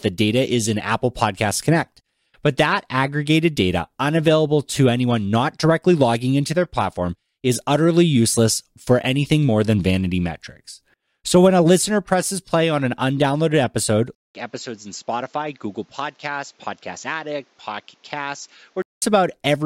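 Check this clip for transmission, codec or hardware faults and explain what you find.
One fault is present. From 14.15 to 19.02 s, the input likely switched to a poorer device. A short silence of 200 ms marks the switch. The new path passes nothing above 7.6 kHz, so the speech turns dull and boxy. It drops roughly 10 dB in level and carries a new, faint background noise.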